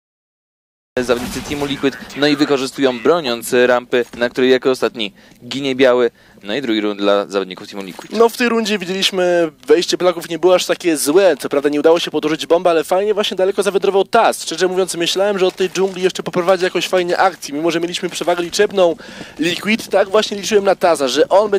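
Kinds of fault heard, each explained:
Cut-off start: digital silence until 0.97 s, then the sound begins abruptly mid-event, with no natural attack, because recording started late.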